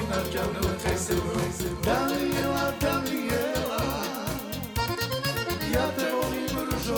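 From the very start until 2.42 s, a doubled audio track is already under way: a second full-band copy of the sound trails the original by roughly half a second, about 5 dB quieter, then cuts off abruptly. The likely cause is the same signal being captured again through a slower path. Unlike an echo or reverb, there is only one repeat, with no decay and no room colouring.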